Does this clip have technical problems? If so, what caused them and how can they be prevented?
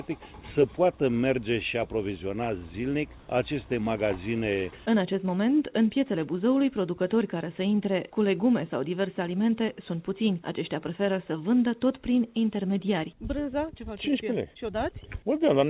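Yes. Comfort noise in place of the background, 3.20 to 3.28 s: 80 ms of real background becomes steady, featureless noise about 1 dB quieter, likely the receiver's synthetic fill during discontinuous transmission. Disabling discontinuous transmission on the sending side keeps the real background throughout.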